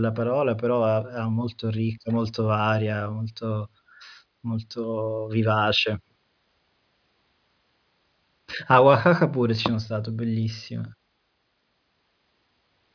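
No technical faults can be heard anywhere in the recording.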